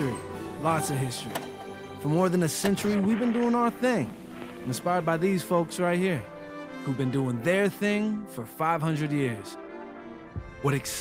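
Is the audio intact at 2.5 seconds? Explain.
Yes, at 2.5 seconds the audio is intact, with no dropout, click, distortion or other fault to be heard at that point.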